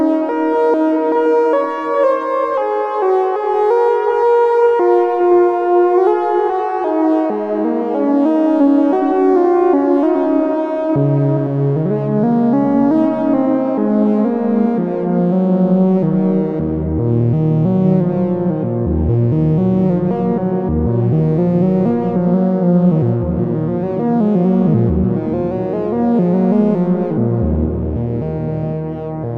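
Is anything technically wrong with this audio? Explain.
No, nothing technically wrong.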